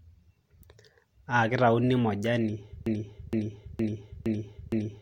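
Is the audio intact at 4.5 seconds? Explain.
No. At 4.5 s the speech sits inside a broken-record loop that runs from 2.86 s to the end of the clip. The likely cause is a stalled player, encoder or stream that kept resending the last fragment it held. A piece about 0.46 s long plays five times, back to back and identical each time, so the same snippet stutters on. Whatever speech belonged in that span is gone.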